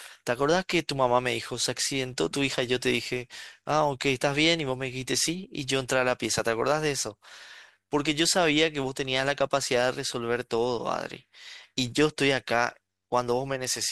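Throughout the speech, a filter restarted on every block: each block starts from silence, producing a 93.8 Hz buzz that tracks level, which fits a 512-sample block.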